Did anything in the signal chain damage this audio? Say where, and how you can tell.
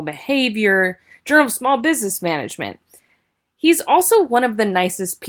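Yes. A lost packet rebuilt from error correction sits at 1.79 s, in the network stage. For about 20 ms the speech turns rougher and noisier, with no gap or dropout, which fits a single lost packet. The following packet carried a low-bitrate copy of the missing one through Opus in-band forward error correction, so the decoder played that coarser copy instead of the original and kept the audio continuous.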